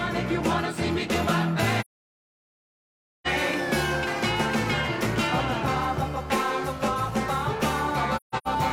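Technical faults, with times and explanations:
1.80–3.27 s, AAC frame loss with muting: a soft-edged silence of about 1.45 s, which fits some 34 consecutive AAC frames going missing. The decoder zeroed their spectrum, and the overlapping transform windows fade the sound out and back in.
8.16–8.48 s, AAC frame loss with muting: several short dropouts scattered over about 384 ms, totalling about 256 ms, which points to roughly six lost frames. The longest gap runs around 150 ms. Each zeroed frame leaves a gently faded hole rather than a hard cut.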